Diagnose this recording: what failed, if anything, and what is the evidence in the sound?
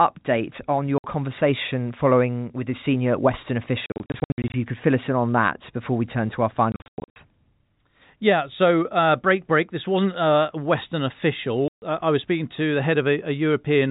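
Packet loss filled with silence (network stage) cuts hard-edged holes into the speech at 0.98–1.04 s before "conversation following with the", scattered through 3.86–4.54 s before "you could fill us", 6.72–7.16 s after "we turn to our", and 11.68–11.82 s. The gaps come in steps that fit 20 ms packets, each lost one replaced by silence.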